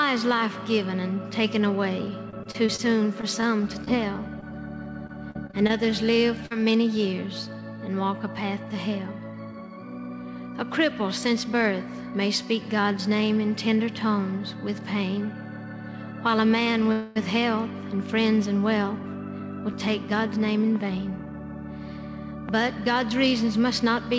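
The audio passed through a call path whose codec leaves nothing above 8 kHz, consistent with G.722 at 64 kbps, and it carries three kinds of fault. From 2.30 to 4.53 s and again from 5.07 to 6.52 s there is repeated packet loss (robotic sound). The first stretch has 11 short holes, the longest 37 ms, covering about 9% of the span. The second has 7 holes, the longest 44 ms, covering about 12%. Each hole is patched by stretching the preceding sound, and the next hole follows soon after, so the sound turns choppy. About 100 ms of real audio is lost in the first stretch and 160 ms in the second. That loss of real audio is what separates this fault from a freeze.

At 16.92 to 17.18 s there is a call audio freeze. For 237 ms the last sound is drawn out as a fading buzz or hiss without dropping to silence. The audio then resumes exactly where it stopped, with nothing missing, and the delay is 237 ms longer from that point. 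The likely cause is packets held up in transit until the jitter buffer ran dry. Unlike the loss stretches, this is one continuous hold rather than many small gaps.

From 19.03 to 21.34 s a jitter buffer speed-up runs the audio at about 107% speed. Pitch stays the same while the pace sounds hurried. The receiver trims short pitch-period pieces, about 150 ms in total, to shed extra buffered delay. Unchanged pitch shows this is cutting rather than faster playback of the whole signal.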